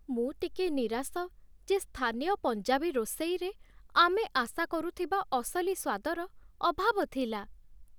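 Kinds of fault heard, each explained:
No kinds of fault are heard in this speech.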